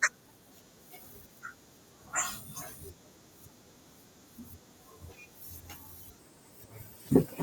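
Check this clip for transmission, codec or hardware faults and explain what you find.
There's one fault, a section at the wrong speed, running from 6.19 s to the end at 7.43 s. That last stretch plays back 1.29 times too fast, so the speech jumps up about four semitones and sounds hurried, most likely from being fitted to the wrong playback clock.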